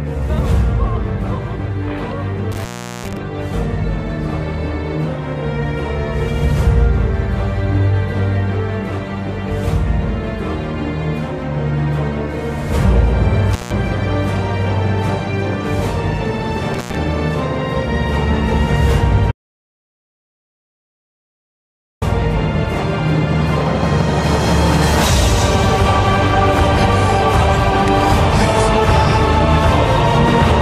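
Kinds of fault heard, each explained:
Intermittent contact: a loose connection opens briefly, so the sound breaks off with crackle at each edge and faint hiss underneath, at 2.52–3.17 s, 13.53–13.71 s and 16.74–16.96 s. Unlike true silence, some line noise persists through each gap.
Audio dropout to silence: from 19.31 to 22.02 s, about 2.7 s of audio vanishes into silence with no room tone or hiss. This is likely an input lost upstream while recording continued writing empty samples.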